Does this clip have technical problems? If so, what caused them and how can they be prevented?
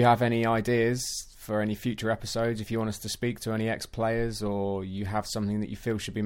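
No, nothing in this speech recording stood out as a technical problem on listening, so there is no cause to trace or prevention to suggest.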